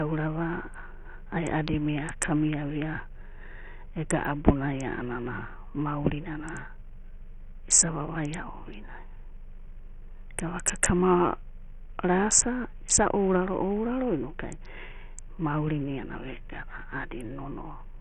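Throughout the speech, the treble stops near 11.6 kHz and a gritty noise with aliasing rides on it. The likely cause is heavy Bluetooth SBC compression at a very low bitrate.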